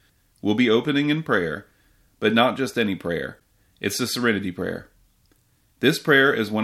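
A broken MP3 bit reservoir is the likely cause of the split-second glitch at 3.38 s in this speech clip, where the audio jumps ahead. Frames were probably cut out, so the next frame, roughly 26 ms long, decoded its borrowed data from bytes belonging to another frame.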